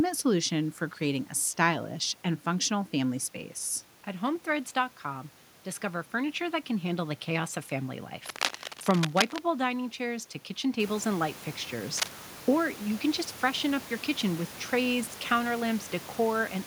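From 8.26 to 9.39 s, after "the chaos of family", and again at 11.96 to 12.15 s, after "kitchen tables and light", cable scratch noise rustles loudly over the speech, likely from a worn connector shifting. It appears as ragged broadband smears and jagged waveform spikes.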